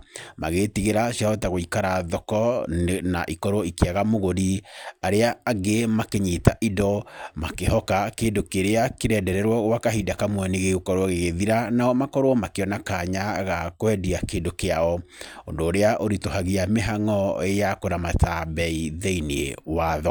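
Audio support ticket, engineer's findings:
Speech signal checked by ear throughout, with no audible technical fault in level, continuity, timing or frequency content.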